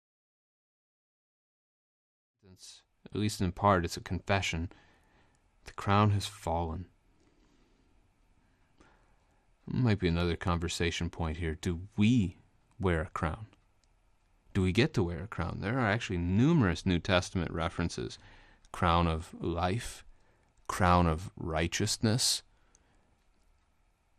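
A speech recording, and the whole thing carries a dull, gurgling, granular edge that points to MP2 compression as the likely cause, fitting a stream at around 80 kbps. The upper sub-bands drop in and out, and what's left is coarsely quantised. The gentle fade-in that finishes at 3.49 s is clean.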